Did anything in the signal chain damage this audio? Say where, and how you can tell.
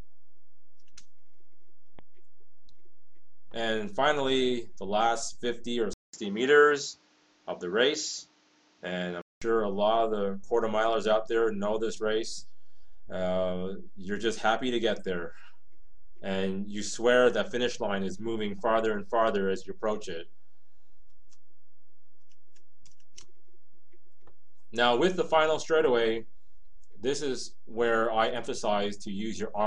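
Yes. At the capture stage, from 5.93 to 9.42 s, the sound dulls after a 200 ms gap. The spectrogram shows nothing above 7.6 kHz, a new noise floor about 35 dB down, and the waveform shifts roughly 5 dB, likely the input switched to a poorer device.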